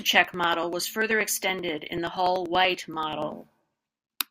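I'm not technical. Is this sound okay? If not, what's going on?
No, it isn't. This speech has periodic USB or driver dropouts: from 0.05 to 4.18 s, roughly every 0.1 s, a few milliseconds of audio get skipped, probably around forty times. That's a recurring tick while the voice is talking, from something interrupting the audio connection.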